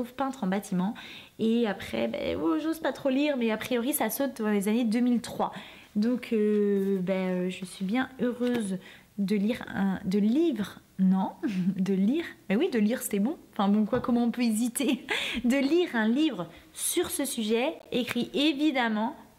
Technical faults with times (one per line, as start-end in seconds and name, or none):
17.79-17.87 corrupt frame decoded